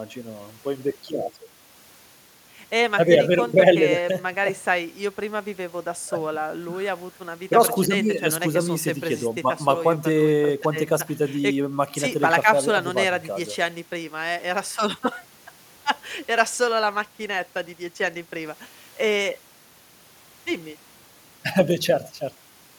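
No technical faults are audible anywhere in the speech recording.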